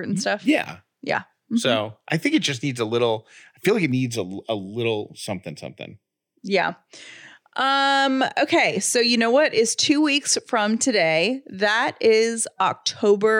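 At 3.92–6.39 s, after "I feel like it", an approximately 0.4 ms channel delay makes speech hollow, notching near 1.5 kHz: evenly spaced spectrogram bands.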